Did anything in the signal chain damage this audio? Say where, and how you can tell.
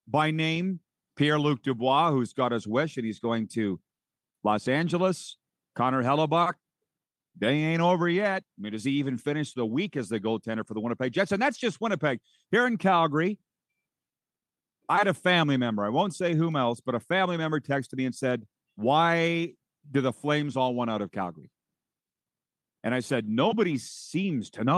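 No, no signal-chain damage heard.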